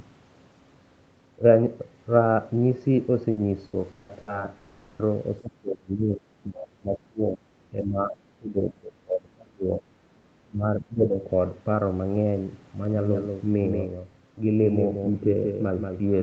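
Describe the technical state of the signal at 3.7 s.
Repeated packet loss (robotic sound) runs from 3.31 to 4.30 s, so 3.7 s sits in the middle of it. Over that second the stream dropped out four times, and each hole was patched by stretching the sound that came before it. The longest patch lasts 180 ms, and about 360 ms in total, over a third of the span, is concealment rather than real signal. The result is a choppy texture with pieces of speech missing.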